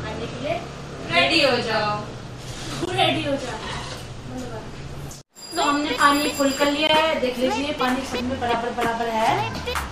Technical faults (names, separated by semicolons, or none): gap between chunks